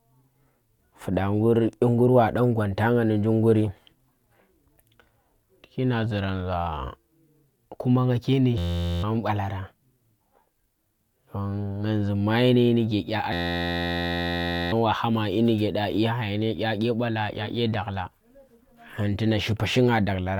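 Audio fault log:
8.58–9.03 s, system hang loop: right after "kuma nga ke ndi" the sound freezes into an 11.61 ms fragment repeating exactly, heard as a steady buzz at 86.1 Hz. The system stalled while the audio hardware kept replaying its ring buffer, which fits a 512-sample buffer. About half a second of audio is lost.
13.33–14.72 s, system hang loop: the same 86.1 Hz buzz returns for longer, and about a second and a half of audio is lost.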